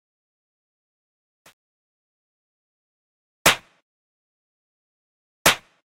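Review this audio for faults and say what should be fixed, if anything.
The fade-in from 0.0 to 3.54 s shows truncation distortion on a fade. The gain stage rounds its output to what sounds like 9-bit resolution with no dither, so the quiet early part turns into a few coarse square steps. From 0.0 to 2.89 s it is worst and sounds gritty. On a waveform the low-level section looks stair-stepped; a spectrogram shows broadband hash and harmonics smeared above the sound. To prevent it, apply fades at high word length and dither before any reduction in bit depth.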